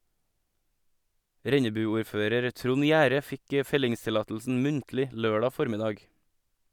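No technical faults are audible anywhere in the speech.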